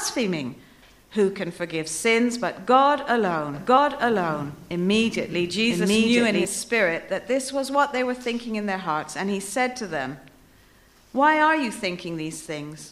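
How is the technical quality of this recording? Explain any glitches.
The recording has two kinds of glitch: two brief jumps where compressed audio is missing, and a stretch where the sound plays twice.

Compressed frames skipped occurs at 0.58 s and again at 3.76 s. The decoder had no usable data for a few blocks, so playback jumps forward: about two 23.2 ms frames (roughly 50 ms) the first time and about three (roughly 70 ms) the second. At each join the sound resumes slightly further along than expected.

A doubled audio track runs from 3.54 s to 6.45 s. A second copy of the full-band sound plays about one second behind the first, at roughly the same loudness. It switches on and off abruptly and has no decay or room tone, which separates it from a real echo or reverb tail. The likely cause is the same signal being captured twice, once through a slower path.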